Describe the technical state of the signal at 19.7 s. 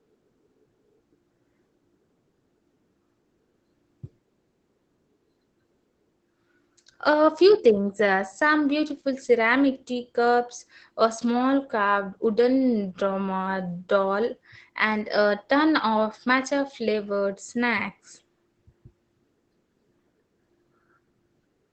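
At 19.7 s the speech carries Opus voice compression, present across the whole clip. At about 12 kbps the SILK linear-prediction coder keeps a wideband signal but codes its excitation coarsely, so the speech sounds hoarse and faintly robotic rather than showing the watery, swirling treble of transform-codec damage.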